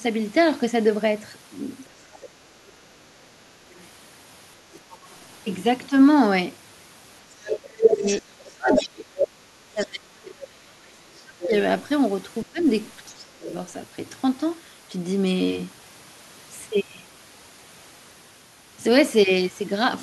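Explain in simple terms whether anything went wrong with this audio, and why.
The other side's voice leaking through appears at 1.88–2.29, 3.78–5.16, 7.84–9.87, 11.41–11.61 and 13.49–13.54 s. It is faint early on and nearly as loud as the talker around 8 to 10 s. The likely cause is an echo canceller failing to remove the loudspeaker sound picked up by the microphone.

Speech suppressed in double talk occurs from 7.42 to 11.53 s and again from 12.44 to 13.47 s. The talker's voice drops sharply, sometimes almost to silence, while both sides speak at once. The canceller likely could not separate the talker from the echo and turned everything down.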